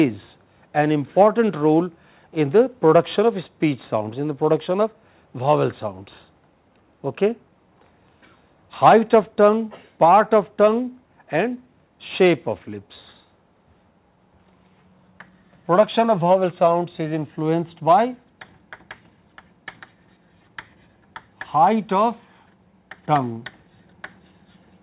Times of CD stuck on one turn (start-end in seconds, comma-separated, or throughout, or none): none